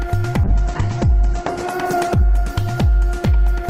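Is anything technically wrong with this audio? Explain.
Yes. From 0.45 s to the end of the clip there is a call bitrate drop. The connection's bandwidth estimate fell, and the encoder had to spend far fewer bits, which fits a fall from about 64 kbps to about 10 kbps. It held at its lowest for about 1.05 s. With so few bits, the codec quantises coarsely and narrows the audio band from 20 kHz to 8 kHz, so the sound turns muffled, rough and watery.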